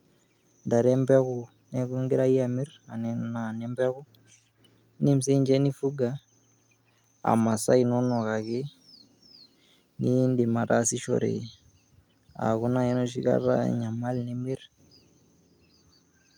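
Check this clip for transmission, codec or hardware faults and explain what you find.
No faults detected in this recording.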